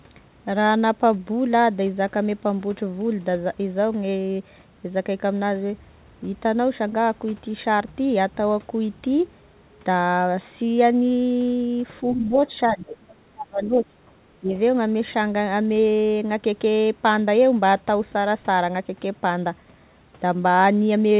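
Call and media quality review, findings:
Speech suppressed in double talk, 12.14–13.98 s and 14.4–14.51 s: talker's voice ducks for about 1.6 s in total, deepest dip about 30 dB, then a short dip of about 15 dB. Likely echo canceller attenuating near-end speech while both ends talk at once.

Other side's voice leaking through, 12.66–12.96 s: faint second voice, about 15 dB below the talker, heard inside the suppressed stretch. Likely residual loudspeaker echo the canceller failed to remove from the microphone signal.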